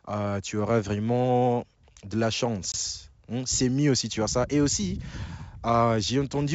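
At 2.72 s there's a 20 ms hard-edged dropout, packet loss on an ADPCM call; roughly one packet's gap, after which the speech comes back slightly distorted while the decoder resyncs.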